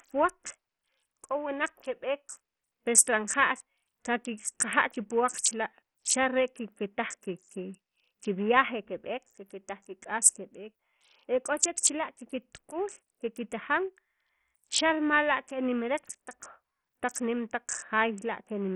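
A starved bit pool, likely from heavy Bluetooth SBC compression at a rate that fits roughly 48 kbps, coarsely quantises the sub-bands for the whole speech clip. Nothing remains above 15.7 kHz, the upper treble flickers in and out, and gritty noise with aliasing rides on the speech throughout.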